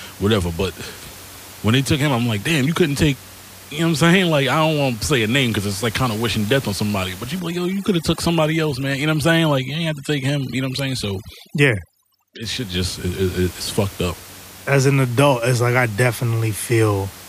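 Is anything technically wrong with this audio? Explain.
Yes. Overdone noise removal from 7.40 to 12.43 s: an aggressive noise reducer shuts off bands near its noise estimate. The room noise, about 19 dB below the speech, collapses into twinkling specks, and quiet parts of the speech go with it.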